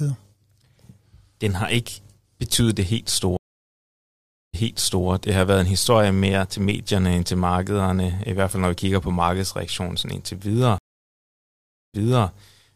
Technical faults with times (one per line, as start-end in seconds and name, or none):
3.37-5.07 stream reconnect
10.78-12.29 stream reconnect